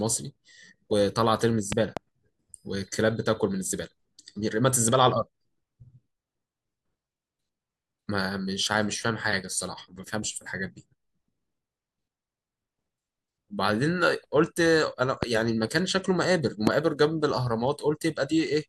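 A stray voltage spike, likely from a switch, plug contact or static discharge, is entering the signal chain, producing a loud pop over the speech: a double pop from 1.72 to 1.99 s standing well above the level, then single, even sharper pops at 15.23 to 15.25 s and 16.67 to 16.69 s.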